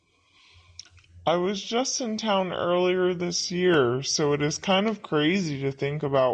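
From start to finish the speech sounds low and dragging, slowed to about 0.73 of its natural pace and dropped roughly 5.5 semitones in pitch, with tempo and pitch sinking together. That coupling marks a wrong sample rate: the samples are being played back slower than they were captured, with no conversion between the two rates. The ratio fits audio recorded at 44.1 kHz and played at 32 kHz.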